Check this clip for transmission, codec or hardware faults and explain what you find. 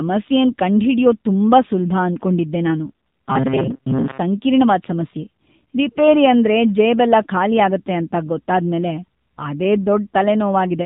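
Two faults are present. Throughout, the speech shows AMR narrowband mobile codec damage: nothing above 4 kHz, with a buzzy, synthetic texture that fits a low bitrate around 7.4 kbps. From 3.28 to 4.20 s, a rigid metallic buzz at 133 Hz follows the speech only roughly. This is robotic sound, likely from repeated short buffers of about 7.5 ms, with roughly half the audio repeated instead of new.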